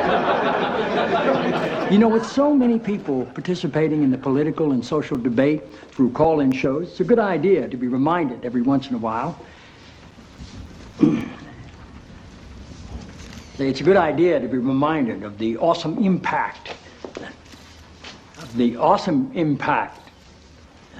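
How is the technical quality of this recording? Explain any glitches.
Two bursts of CD scratch ticks, 4.87–6.52 s and 9.01–11.75 s, each around four a second. A scratch defeats error correction each revolution, leaving brief interpolated gaps of a few milliseconds, seen as thin vertical spectrogram lines and waveform notches.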